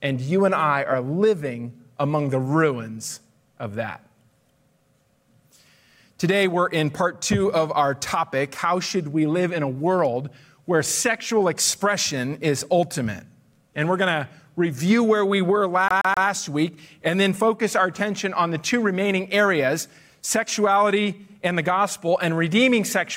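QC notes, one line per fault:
15.88 to 16.27 s, CD stuck on one turn: the sound catches on a tiny slice about 128 ms long and plays it three times in a row, with a brief mute at each jump back. That's the laser getting knocked back a track at the same spot on each rotation, likely from a scratch, so you get the quick, perfectly even stutter of a skipping disc before it breaks free and carries on.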